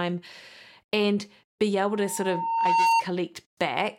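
At 1.88 s, just after "and be", a loudspeaker feedback squeal begins: a pure tone near 911 Hz swells over roughly a second and peaks around 5 dB above the speech before cutting off at 3.03 s. The microphone is picking up its own loudspeaker, and at that frequency the loop gain exceeds one, so the tone keeps reinforcing itself. A spectrogram shows a single bright horizontal line that brightens steadily, and the waveform's envelope swells to match.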